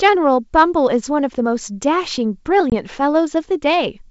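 From 2.70 to 2.73 s, packet loss on the ADPCM call removes about one packet, leaving a hard-edged 20 ms hole: a flat waveform gap and blank vertical spectrogram strip. The decoder's predictor and step size drift, so speech returns slightly distorted.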